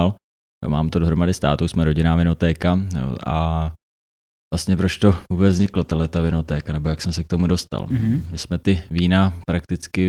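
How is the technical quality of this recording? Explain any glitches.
The recording has one fault, a call bitrate drop, from 5.48 s to 8.51 s. For nearly 3 seconds the speech turns coarse and watery, with the top end dulled. The encoder was given far fewer bits and quantised the signal more roughly, shedding high frequencies. The change in sound fits a fall from about 40 kbps to 14 kbps. Unlike packet loss, there are no gaps or clicks; the degradation is continuous and then lifts.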